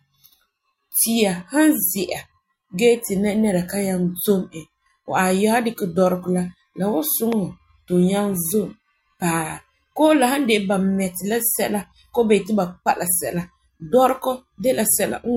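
At 7.32 to 7.35 s there is a single loud pop. It is a sharp click, about 10 dB above the speech, which carries on underneath. A likely cause is a sudden voltage step, such as static or a switch, entering the signal path.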